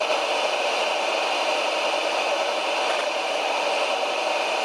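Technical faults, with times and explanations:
Throughout, channel delay (doubling). One channel arrives 92.9 ms late, and both are summed to mono. The late copy is heard as a slap echo at equal level after each sound. The gap fits a 4096-sample buffer.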